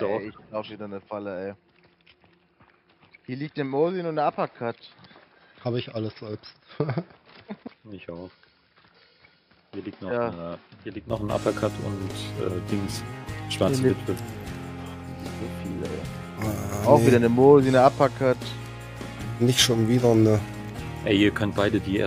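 From the start to 11.1 s the sound is dull and boxy, with nothing above 5.3 kHz, a level roughly 10 dB lower and a faint new noise floor. This points to a likely input switched to a poorer device. At 11.1 s the spectrogram's band abruptly widens and the waveform grows, with no gap at the switch.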